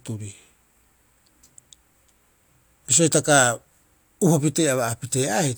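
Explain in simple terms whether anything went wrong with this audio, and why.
Nothing went wrong with this speech recording: the signal stays steady and intact throughout, with no technical faults to point to at any moment.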